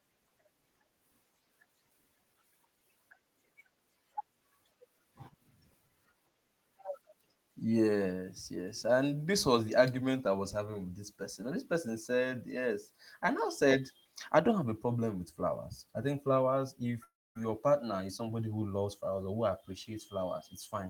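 Right after "I think flowers if", at 17.03 s, the sound smears into a fading buzz and then goes quiet until 17.37 s, picking up at "partner is somebody". That's a long network dropout, likely: roughly a third of a second never arrived and gets skipped.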